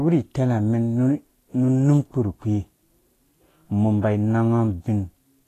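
From start to finish the speech sounds hissy and grainy, with roughened tones, smeared consonant attacks and nothing above 14.2 kHz. This is likely Vorbis compression at a low setting that fits roughly 33 kbps, where coarsely quantised treble turns fine detail into noise.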